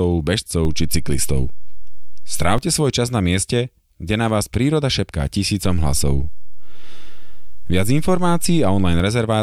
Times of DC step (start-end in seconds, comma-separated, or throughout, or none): 0.65-2.58, 5.65-9.00